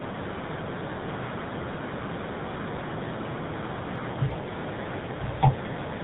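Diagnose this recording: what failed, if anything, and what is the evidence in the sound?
Tandem speech coding at the codec stage, present from start to finish. The speech is rough, muffled and warbly beyond what one narrowband coder produces, and nothing reaches above 3.8 kHz. The character points to two speech codecs in series, an AMR-NB stage followed by GSM full rate, with G.711 between them. Each transcoding border decodes and re-encodes, so the second coder models the first coder's artefacts as if they were speech and compounds the distortion.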